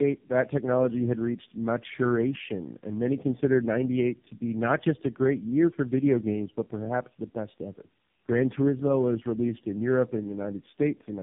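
Tandem speech coding runs through the whole clip. The speech sounds rough, muffled and warbly, and nothing reaches above 3.7 kHz. The call seems to have passed through three low-rate speech coders in a row, with each border decoding the sound and coding it again. The character points to a GSM full-rate link followed by two AMR-NB stages near 7.4 kbit/s. Each coder reworks the previous one's errors, so the damage builds up.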